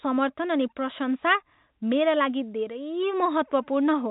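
Nothing stood out on listening to this speech clip, which has the narrow band of G.711 telephone coding, with nothing heard above 3.8 kHz.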